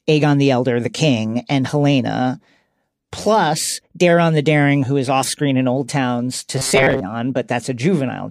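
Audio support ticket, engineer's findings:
Robotic sound from repeated short buffers, 6.56–7.01 s: speech becomes a rigid metallic buzz at 134 Hz. Likely buffer underrun; a ~7.5 ms chunk replayed over most of the span. Spectrogram: flat harmonic stack at 134 Hz. Waveform: identical repeating cycles.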